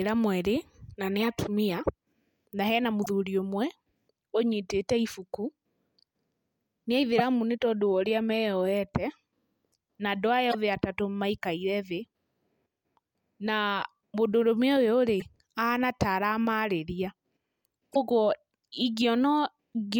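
Brief blips, each about 55 ms long, break into the speech at 3.02, 7.15, 10.49, 15.17 and 17.91 s. They come from damaged data in the compressed stream: corrupted bytes make the decoder misread frames, lose sync and hunt for the next valid frame header.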